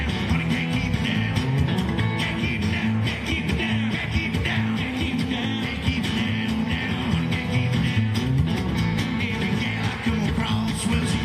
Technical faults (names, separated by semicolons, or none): none